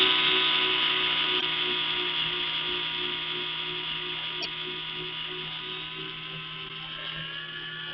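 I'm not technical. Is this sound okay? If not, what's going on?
No. There are three brief glitches from damaged data in a compressed stream, at 1.37–1.43, 4.40–4.46 and 6.65–6.71 s. Bits of the file got scrambled, so the player stumbles and you hear a quick chirp or blip.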